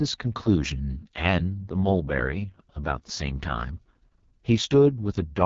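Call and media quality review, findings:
AMR wideband (HD Voice) codec, heavy, throughout the speech. Rough, raspy texture; fits AMR-WB at its lowest 6.6 kbit/s mode. Speech modelled as pulse-excited vocal tract below 6.4 kHz, with too few bits for fine detail. Band above filled with synthetic noise. Nothing above 7.3 kHz. Probable component: mobile HD Voice leg.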